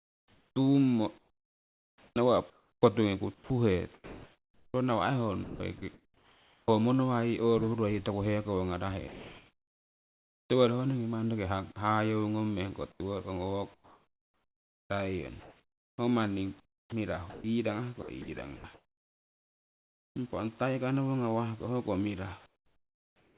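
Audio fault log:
0.00–6.68 s and 12.92–20.16 s, sound chopped by the voice detector: about 3.8 s and 3.9 s of sound are replaced by comfort noise, likely from voice-activity gating toggling transmission.
9.08–10.50 s and 22.46–23.38 s, comfort noise in place of the background: the real background gives way to steady featureless hiss, about 1 dB and about 15 dB quieter, likely from discontinuous transmission.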